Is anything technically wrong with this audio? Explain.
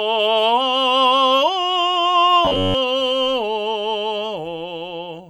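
Yes. From 2.45 to 2.75 s the music takes on robotic sound from repeated short buffers: a rigid, metallic buzz at about 94 Hz that roughly tracks the music's contour. The likely cause is audio arriving too seldom, so playback loops the last fragment of roughly 10.7 ms while fresh material is skipped. Those loops fill most of this stretch. Unlike a plain dropout or stutter, there's no gap, just a fixed pitch imposed by the loop rate.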